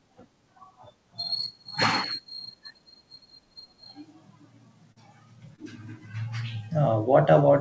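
Short concealed packet loss at 4.92 to 4.98 s and 5.56 to 5.60 s: roughly 40 ms and 20 ms of speech arrived too late, so the decoder extended the preceding sound and blended back, leaving brief smears in audio band-limited to 8 kHz.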